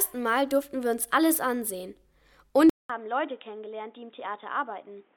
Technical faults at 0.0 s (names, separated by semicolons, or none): none